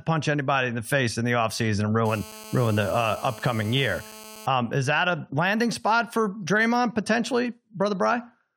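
From 2.06 to 4.47 s a hard, raspy buzz at 217 Hz, dense with harmonics, runs steadily under the speech at about 19 dB below it. This is GSM phone buzz: a nearby 2G phone on a call transmits 217 bursts a second, and the audio circuitry rectifies those radio pulses.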